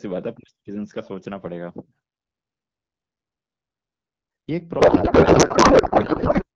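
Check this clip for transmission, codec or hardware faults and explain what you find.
One fault is present: a codec payload misread in the last stretch of the speech. From 4.79 to 6.45 s the receiver unpacks octet-aligned AMR frames as if they were bandwidth-efficient, so every field sits in the wrong bit positions. The decoder still accepts these valid-looking frames, and the speech gives way to garbled noise and warble that barely follows it, until shortly before the clip ends. Before 4.79 s the AMR wideband (HD Voice) coding is clear, with only light coding damage, which fits a rate of 12.65 kbit/s.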